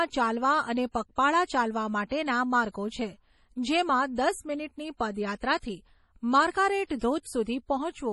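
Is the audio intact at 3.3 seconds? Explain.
No. Heavy MP3 compression runs through the whole clip, including 3.3 s. Nothing is heard above 11.5 kHz, and the speech sounds watery and swirly, likely from a bitrate near 32 kbps.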